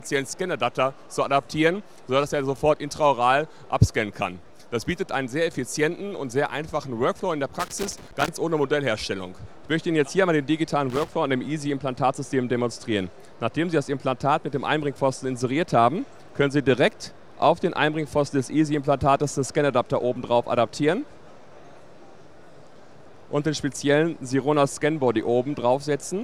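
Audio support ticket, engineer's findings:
Loose connector crackle, two bursts. First at 7.60–8.29 s, about 0.7 s long. Second at 10.90–11.12 s, about 0.23 s. Irregular scratchy crackle over the sound. Probable component: a worn or dirty plug or jack contact. The contact makes and breaks as the cable moves, chopping the signal. Any DC on the line turns each break into a pop. Check and reseat the cable connectors; replace if worn.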